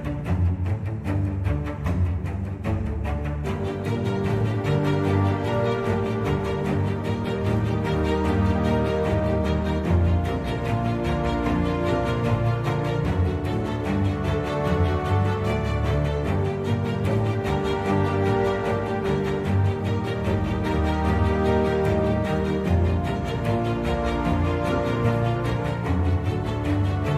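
No technical faults can be heard anywhere in the audio.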